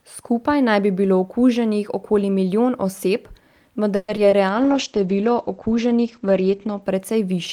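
From 3.95 to 4.10 s the speech is stretched by a fading buzz lasting about 130 ms, likely a call audio freeze. Nothing is lost; the speech resumes where it stopped, only later.

Short concealed packet loss follows at 4.16–4.26 s and 4.30–4.34 s. About 20 ms of real audio is gone each time, bridged by brief smears.

From 4.49 to 6.88 s a call bitrate drop from 32 to 12 kbps narrows the bandwidth from 20 kHz to 8 kHz. The speech turns muffled and rough but stays continuous.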